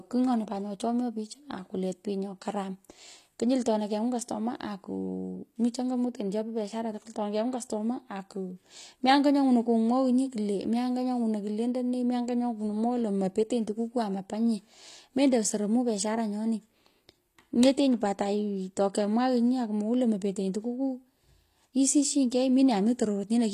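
From start to finish, the treble in this speech has that gritty, metallic edge, with s sounds coming out lispy, and nothing at all above about 14.9 kHz. That's likely HE-AAC compression, at a low rate that fits something around 24 kbps. The codec keeps the lower band and fakes the top by copying it upward under a rough envelope, so the highs don't line up with the real harmonics underneath.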